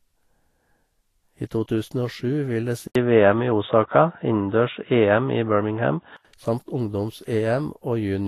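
It's a speech recording with a grainy, hissy top end that stops dead around 14.2 kHz, which points to Vorbis compression, likely at a low bitrate near 28 kbps. From 2.87 to 6.25 s it turns dull and boxy, with nothing above 3.8 kHz, an 80 ms gap at the switch, a few dB level shift and a faint new noise floor. That's likely the input switched to a poorer device.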